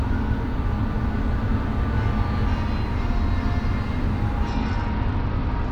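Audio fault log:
4.49–5.71 s, Bluetooth SBC bit pool drop: the encoder lowered its bit pool, starving upper sub-bands and coarsening the rest, so treble dulls and grit rises.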